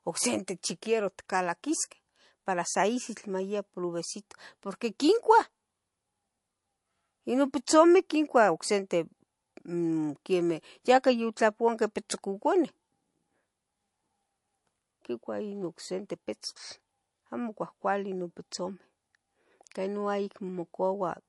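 MP3 compression likely runs throughout the speech: the treble stops dead at 11.3 kHz, and the damage is plainly audible. Starved of bits, which fits roughly 48 kbps, the encoder cuts the top band and drops weak frequency lines frame to frame, leaving a watery, swirly texture.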